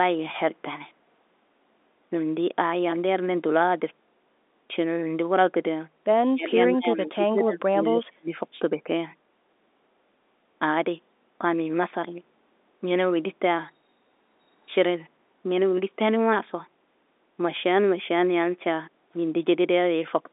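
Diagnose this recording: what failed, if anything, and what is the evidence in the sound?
Call processing: speech suppressed in double talk, likely the echo canceller treating the near talker as echo while the far end spoke. The level drops by about 35 dB at 6.31–6.56 s and 6.74–8.4 s, then by about 5 dB at 8.77–8.88 s.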